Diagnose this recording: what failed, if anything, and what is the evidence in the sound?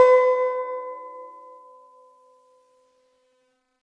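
Wrong sample rate at playback: the music runs about 1.38 times fast and roughly 5.5 semitones sharp throughout, which fits 16 kHz material played at 22 kHz without conversion.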